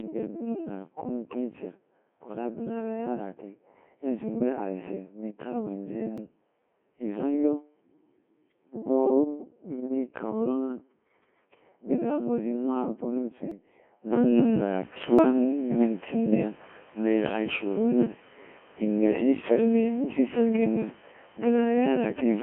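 Throughout, the speech passes through a Codec 2 vocoder at 1.6 kbit/s within a 200 Hz to 3.4 kHz line band. Heavy resynthesis from pitch and envelope leaves it robotic and buzzy.

At 6.18 s, just after "aze ni itarwɛɛ inzee", a jump in the sound marks a dropped buffer (overrun). The likely cause is samples overwritten before collection, losing around 50 ms. Similar skips follow at 13.51 s, after "zi maakpɔ ru", and at 15.19 s, each losing roughly 150 ms.

From 14.13 s to the end, the input switched to a poorer device, likely another microphone. The change comes without a gap. The level shifts by around 5 dB, and new noise sits roughly 35 dB below the signal.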